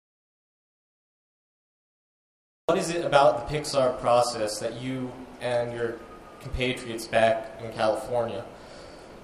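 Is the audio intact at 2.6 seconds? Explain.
No. At 2.6 seconds the clip is still inside an audio dropout to silence. It is already under way when the clip begins and lasts until 2.69 s. The gap is silent with no room tone. The input was likely lost while silence kept being written.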